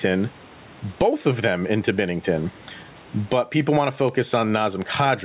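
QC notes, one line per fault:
Throughout, gain pumping: the gain ducks around 15 dB under each loud syllable, likely from gain set way too hot with a fast limiter clamping down.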